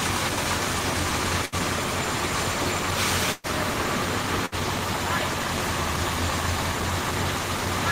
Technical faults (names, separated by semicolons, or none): burst of packet loss